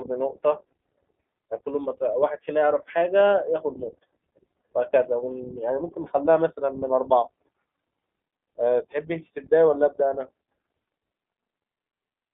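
iLBC codec coding runs throughout this speech clip: the audio is confined to roughly 200 Hz to 3.4 kHz, and each 20 ms frame's excitation is coded independently, leaving a plainly rough, synthetic texture consistent with iLBC at 15.2 kbps.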